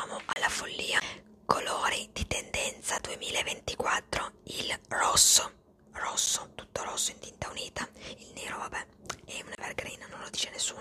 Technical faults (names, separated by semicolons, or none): block of digital silence